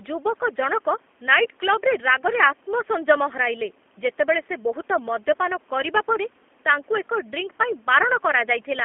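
From start to finish the speech carries G.729 codec damage, plainly audible. The band is held to a telephone line, roughly 150 Hz to 3.4 kHz, so there are no low-end body and no sibilant air. Because the speech is rebuilt from a filter model, a pitch predictor and a few pulses per frame, it sounds slightly rough and synthetic, which fits an 8 kbit/s G.729A stream. The room noise, about 35 dB below the speech, takes on a warble.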